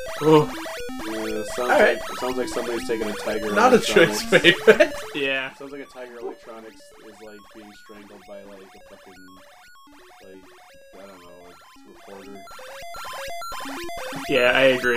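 From 11.92 s to 13.22 s, a fast ticking, zipper-like texture rides on the sound while its level changes by around 15 dB. This is zipper noise: the gain is being changed in coarse 1 dB jumps, around fifteen a second, with no smoothing between them, so each jump leaves a tiny click.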